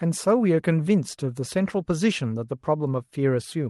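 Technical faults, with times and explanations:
Nothing here amounts to a technical fault, just speech coming over a WebRTC call path using Opus at 32 kbps, with the audio band reaching up to 12 kHz.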